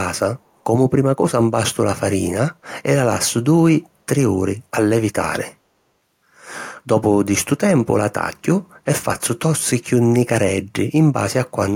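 At 3.84 to 3.89 s a brief echo leak appears: a very faint, delayed copy of the speech trailing the original by 343 ms and lasting about 50 ms. It sits far below the direct signal, so it registers as a faint ghost rather than a clear repeat. The likely cause is a far-end loudspeaker whose echo canceller let a scrap of the returned audio slip through and travel back down the line.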